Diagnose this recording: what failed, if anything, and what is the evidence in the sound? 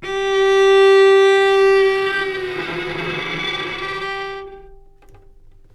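No fault is audible.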